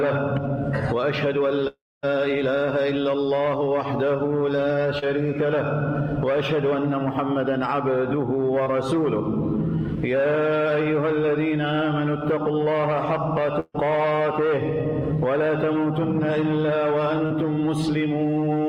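At 1.67 s the sound cuts out, and it doesn't really return until about 2.05 s. That's a long network dropout, and the likely cause is the stream simply stopping for a while. The receiver papers over roughly 350 ms of it by stretching the last sound into a fading buzz or hiss. For about 250 ms of that stretch there's just silence. About 360 ms of real audio never comes back, so when sound resumes it has skipped ahead.

Next up is short concealed packet loss, and there are three of these: 4.99 to 5.04 s, 8.64 to 8.68 s, and 17.26 to 17.32 s. Each time a few hundredths of a second didn't reach the decoder in time, about 40, 20 and 40 ms respectively. The receiver fills the hole by carrying the previous sound forward and then blending back into the real audio. It comes across as a quick smear or wobble.

Between 13.60 and 13.76 s there's a burst of packet loss. A run of packets was lost or came too late to play, leaving a gap of about 140 ms. 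The receiver continues the last sound and turns it down as the gap goes on. You hear a held buzz or fading hiss, with about 30 ms of silence in there. Playback then picks up further along, minus roughly 140 ms of audio.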